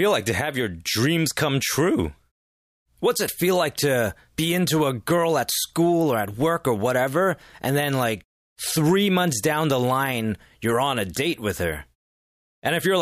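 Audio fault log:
No faults can be heard anywhere in this speech recording. Nothing in it calls for an entry in this log.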